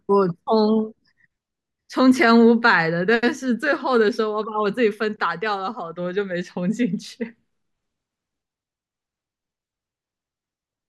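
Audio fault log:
No audible faults in this speech recording; the signal path holds without interruption or defect.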